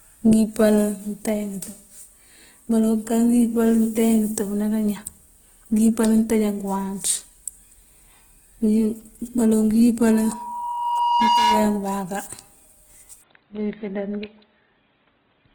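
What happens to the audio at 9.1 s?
At 9.1 s, as through the whole clip, the speech sounds grainy and rough, its detail replaced by noise-like fill, likely from Opus compression in its music mode at a rate near 16 kbps. Unlike MP3 there is little swirling, and the band stays full, reaching about 20 kHz.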